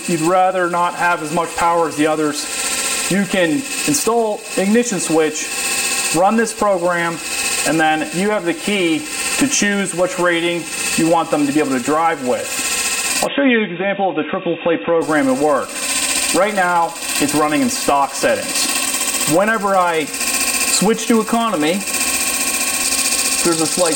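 From 13.26 to 15.02 s the sound turns dull and boxy with nothing above 3.8 kHz, likely an input switched to a poorer device. A spectrogram shows the top band abruptly missing there, with a faint new noise floor about 40 dB down, while the waveform shows no gap or level step.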